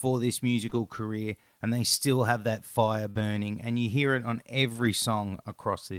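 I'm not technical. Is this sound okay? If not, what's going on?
No. There are two kinds of glitch from a shaky network connection.

Short concealed packet loss: at 0.69 s, just before "career and they still", and at 3.11 s, after "still have that fire", a small piece of sound was lost and patched, leaving a brief smear.

Lost packet rebuilt from error correction: at 0.73 s, 3.15 to 3.21 s and 4.69 to 4.87 s, missing pieces were rebuilt from rough backup copies, so the sound turns briefly grainy.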